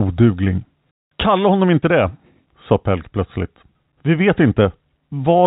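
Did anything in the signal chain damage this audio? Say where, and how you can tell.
No, nothing in the signal chain stood out as damage on listening; the speech comes through with the narrow telephone band of G.711 telephone coding.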